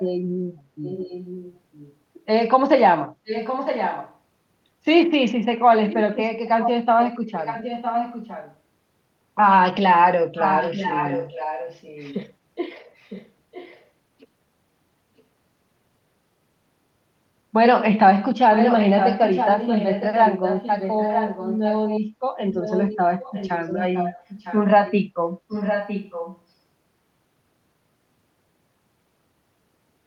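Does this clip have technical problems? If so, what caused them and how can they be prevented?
Yes. Echo leak occurs at 0.00–0.04, 0.84–1.94, 3.25–4.17, 5.88–8.56, 10.35–12.29, 12.97–13.84, 15.18–15.22 and 18.53–26.39 s. A second copy of the speech trails the original by 957 ms. It ranges from barely audible to only about 5 dB under the main speech, and is strongest around 10.4–12.3 s. The likely cause is a far end on loudspeaker whose echo canceller let part of its microphone pickup through and sent it back. Using headphones at that end, or a properly adapted echo canceller, would prevent it.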